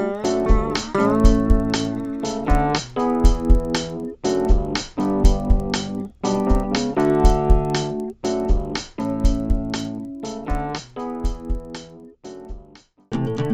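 From start to finish, the sample-rate converter was restarted on every block rather than running continuously, so at each block edge it filtered against missing or wrong neighbouring samples instead of the true ones. The blocks are 50 ms long, and the upward rate change fits conversion from 16 kHz to 48 kHz. Each edge leaves a small error, heard as a regular 20 Hz ticking, almost a low buzz, that rides on the sound and disappears in silence.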